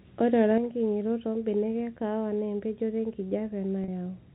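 At 3.84 s there's a packet loss with pitch repetition lasting about 40 ms, which fits two 20 ms packets going missing. The receiver filled the hole by looping the last pitch period, so the voice briefly sounds held and a bit buzzy before carrying on, all over the narrow telephone band of the G.711 coding.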